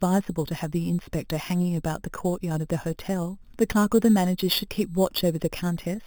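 Throughout the speech there is imaging from sample-and-hold upsampling. Each sample was simply repeated to raise the rate, with no smoothing filter, which fits 8 kHz audio raised to 44.1 kHz. Mirror copies of the spectrum appear at about 17 dB below the speech, the lowest filling 4 to 8 kHz, and they sound like a bright metallic fizz. Unlike steady hiss, the fizz rises and falls with the speech. Like aliasing, the lowest copy moves opposite to the voice's pitch.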